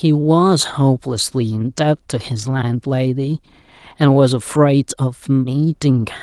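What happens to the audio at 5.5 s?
At 5.5 s the speech continues intact, with no dropout, click, distortion or other fault at that point.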